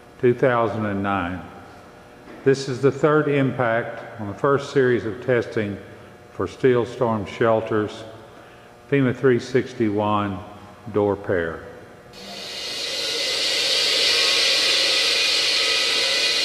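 No technical faults can be heard anywhere in this clip. There is nothing in the sound that needs a time marker or an explanation of its cause.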